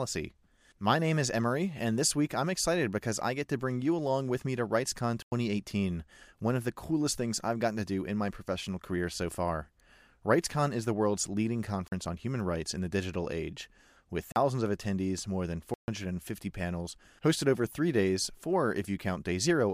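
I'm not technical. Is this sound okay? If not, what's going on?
No. The speech has a block of digital silence four times: 5.22 to 5.32 s, 11.88 to 11.92 s, 14.32 to 14.36 s, and 15.74 to 15.88 s. The audio drops to nothing without warning, likely because the playback software didn't deliver sound in time.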